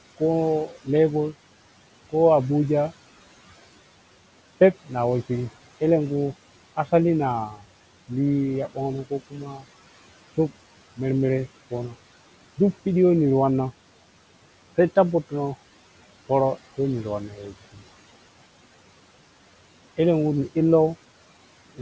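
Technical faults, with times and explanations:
Throughout, noise suppressor artifacts: the background sinks by about 17 dB between phrases and returns beneath them.
0.67–0.88 s, 7.51–7.61 s, 9.3–9.66 s, 17.28–17.87 s, speech cut by the noise suppressor: parts of the speech sound swallowed, dropping by up to about 16 dB, because the suppressor mistook them for noise.
5.97–9.97 s, overdone noise removal: the background drops and breaks up into twinkling specks, as bands near the noise estimate are cut almost entirely.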